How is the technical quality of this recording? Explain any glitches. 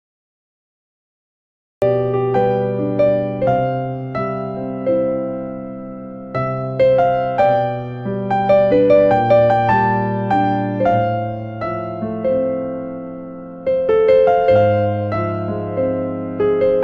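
One glitch is audible. Cut-off start, 0 to 1.82 s: capture began late, so digital silence gives way at 1.82 s to sound already in progress, with no natural attack.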